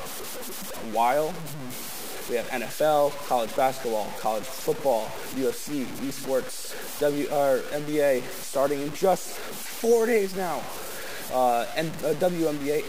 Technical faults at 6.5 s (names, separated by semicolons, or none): low bit depth without dither